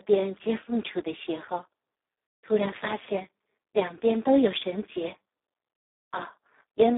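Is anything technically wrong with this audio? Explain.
Yes. Throughout, the speech carries heavy Speex codec damage. Starved of excitation bits at a very low setting, about 4 kbps, the CELP coder leaves voices hoarse, buzzy and robotic. Unlike a plain narrow telephone line (300 Hz to 3.6 kHz, nothing above 3.8 kHz), the harshness lives inside the band itself.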